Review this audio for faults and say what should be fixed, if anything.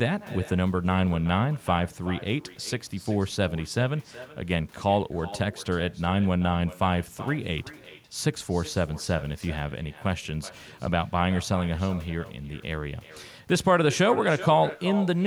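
Echo with no canceller runs throughout: the far end's loudspeaker feeds its microphone unchecked, so each phrase returns roughly 400 ms later, about 16 dB quieter and thinner. A spectrogram shows faint delayed duplicates of every syllable. Echo cancellation or a headset at the far end would prevent it.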